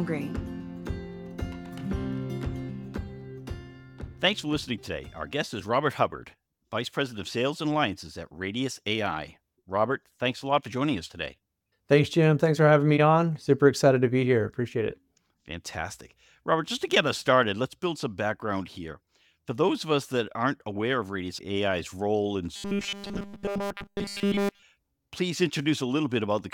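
From 22.56 s to 24.62 s the audio collapses into robotic sound from repeated short buffers: a rigid, metallic buzz with a fixed pitch of 200 Hz that only loosely tracks the original material. A 200 Hz buzz corresponds to a 5 ms segment being looped. The likely cause is fresh audio arriving too seldom, so the playback side repeats the last short buffer while the incoming signal is skipped, and across the whole stretch the output is essentially all repeats.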